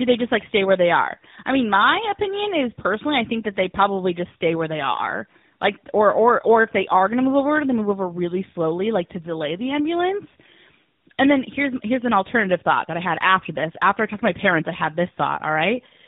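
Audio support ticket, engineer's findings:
Tandem speech coding, whole clip. Rough, muffled, warbly speech; nothing above 3.8 kHz. Likely GSM full rate 13 kbit/s into AMR-NB 12.2 kbit/s, with a G.711 A-law leg between. Second coder re-encodes the first's artefacts. Unlike a single AMR-NB pass, roughness and warble compound beyond what 12.2 kbit/s gives alone. Unlike plain band-limiting, there is warble as well as dullness.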